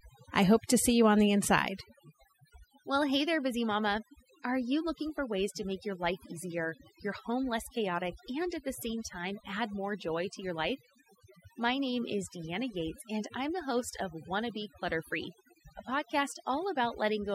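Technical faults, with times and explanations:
Throughout: overdone noise removal. Noise reduction was pushed far too hard on this speech, so every frequency band that sits close to the tool's noise estimate gets pulled down or cut entirely. The background collapses to near silence dotted with twinkling, chirpy specks where isolated bands flicker on and off, and the softer parts of the voice are stripped away with the noise.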